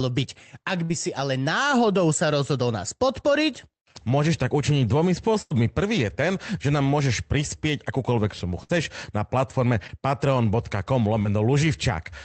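At 0.83 to 0.91 s there is a burst of packet loss. About 60 ms of audio never arrived. The receiver stretched the last sound to cover the hole, fading it as it went. The result is a brief held buzz or hiss, then a jump forward. The same happens at 5.41 to 5.55 s, the longest gap at about 80 ms, and again at 8.63 to 8.71 s, with about 60 ms lost.

Two smaller events follow, each a short concealed packet loss. They fall at 9.87 to 9.91 s and at 11.23 to 11.27 s. Each time roughly 20 ms went missing. The decoder patched it by extending the preceding sound and blending back in. Each one comes across as a quick smear or wobble rather than a clear gap.

All of this rides on an Opus call path, whose band tops out at 8 kHz.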